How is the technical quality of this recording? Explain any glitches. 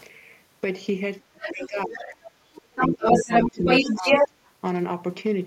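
The recording has clear echo-cancellation problems in its middle section, from about 1.2 s to 4.3 s, where the talker is repeatedly pushed down and a second voice bleeds through.

Speech suppressed in double talk occurs twice, from 1.2 to 2.23 s and from 2.78 to 4.33 s. The echo canceller likely failed to tell the local talker apart from the far-end voice coming out of the loudspeaker, and so attenuated everything at once. The talker's speech dips sharply, by around 30 dB at worst in the first stretch and about 20 dB in the second. Roughly a second and then under a second of speech is affected.

The other side's voice leaking through runs from 1.43 to 4.28 s. Here the echo canceller likely left part of the loudspeaker signal in the microphone feed, so the far-end voice is picked up and sent back. That residue is not faint. It sits at roughly the talker's own level or a little above it, so two voices compete, and the leaked one overlaps both suppression dips.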